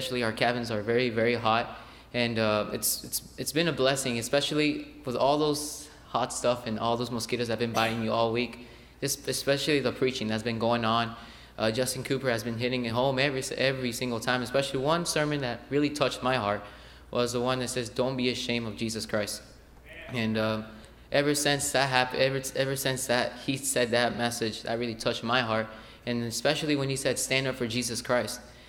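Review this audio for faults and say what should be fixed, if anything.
Nothing to fix: no audible faults anywhere in the clip.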